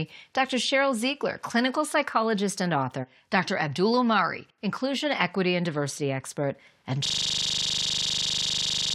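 At 7.06 s, right after "and diversity expert and", the speech gives way to a system hang loop that runs to the end of the clip. The machine or its driver has frozen while the audio hardware keeps replaying the same ring buffer, so a 40 ms slice repeats identically dozens of times, heard as a rigid buzz at 25 Hz. Unlike packet-loss concealment, which fades or varies, this repetition never changes or decays.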